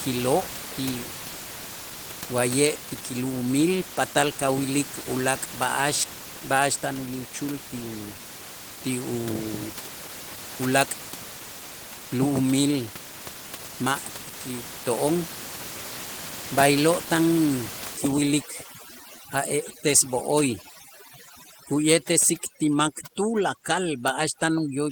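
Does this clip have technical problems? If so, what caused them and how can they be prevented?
Yes. Throughout the speech, the voice sounds muffled and slightly hoarse, with a faintly robotic edge. This is Opus voice compression at a low bitrate, probably around 16 kbps, in hybrid mode. A linear-prediction coder carries the voice band, and a coarser transform layer fills in the highs. At this rate both layers quantise coarsely, so the damage is plainly audible. Encoding at a higher Opus bitrate would prevent this.

From 17.97 s to the end at 24.91 s, the room background, which sits about 13 dB below the speech, drops and breaks up into twinkling specks. This is overdone noise removal. Set too strong, the tool shuts off individual frequency bands whenever they come close to its noise estimate. The quieter parts of the voice fall below that line and vanish along with the background. Gentler noise reduction settings would avoid this.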